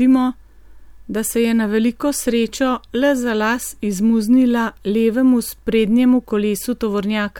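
No technical faults can be heard anywhere in this recording.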